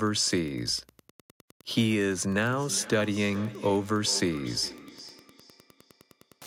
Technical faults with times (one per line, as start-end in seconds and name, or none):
0.00-6.46 Wi-Fi interference
2.50-6.46 feedback echo between two devices